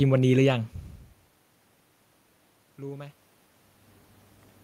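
No technical faults can be heard in the signal chain, and the room noise behind the speech and the level shifts around one second and again near three and a half seconds, where the talker moves relative to the microphone, belong to the recording itself.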